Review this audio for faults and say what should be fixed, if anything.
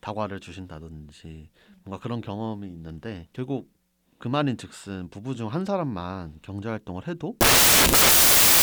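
From 7.41 s to the end of the clip, the speech gives way to loud, harsh broadband noise, the signature of samples built from the wrong bytes. The reader is assembling each sample from misaligned or byte-swapped data, so the rapidly fluctuating low-order bits land in the high-order position and dominate the waveform. To prevent it, verify byte order and frame alignment at every read boundary.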